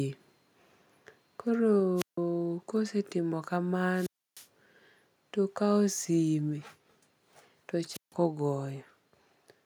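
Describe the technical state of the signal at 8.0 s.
At 8.0 s the speech is caught in a wireless microphone squelch dropout running from 7.89 to 8.13 s. The radio link fades, a brief rise of hiss comes in, and then the receiver's squelch mutes the output for about 153 ms before the speech returns.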